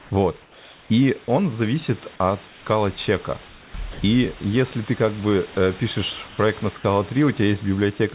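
Comfort noise in place of the background at 0.0 to 0.1 s: the room's natural hiss becomes a flat, featureless noise about 1 dB quieter, likely because the sender's voice detector paused transmission and the receiver synthesised a stand-in.

Comfort noise in place of the background again at 0.42 to 0.9 s, about 3 dB quieter, the longest stretch at almost half a second of smooth synthetic hiss.

Comfort noise in place of the background at 2.48 to 2.66 s, right after "он зависит от": the real background gives way to a blander noise about 2 dB lower.

Comfort noise in place of the background at 3.48 to 3.74 s, with the same featureless texture and a drop of about 3 dB.

Sound dropped by the voice detector at 3.92 to 4.0 s: roughly 50 ms of speech is lost and replaced by steady noise, likely because the detector judged the quiet sound to be background and stopped sending until it triggered again.

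Comfort noise in place of the background at 6.28 to 6.38 s, after "ты как бы э": a brief patch of uniform noise about 2 dB quieter. All of this passes through a band-limited call path with nothing above 4 kHz, which fits G.711 mu-law at 64 kbps.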